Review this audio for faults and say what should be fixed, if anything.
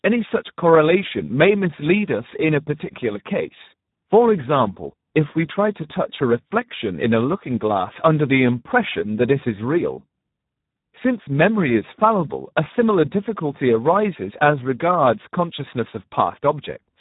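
The Speex codec artefacts run through the whole clip. The speech sounds hoarse and noisy because the excitation gets too few bits. Nothing is present above 3.8 kHz. The damage is heavy, pointing to a bitrate around 8 kbps. To prevent this, record or transmit at a higher quality setting, or use a modern wideband codec.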